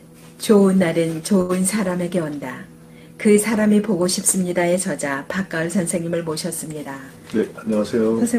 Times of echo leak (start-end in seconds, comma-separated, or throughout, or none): none